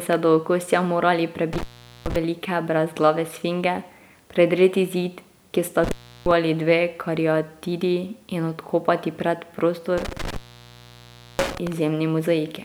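Intermittent contact at 1.53–2.16 s, 5.84–6.31 s and 9.98–11.72 s: a loose connection opens, cutting the speech for 0.43 s before "velike brezglave sfinge", for 0.34 s between "zid ki sta" and "dve kariatidi in odkopati", and for 1.03 s near the end. Each dropout has crackle at its edges and faint hiss while the line is open.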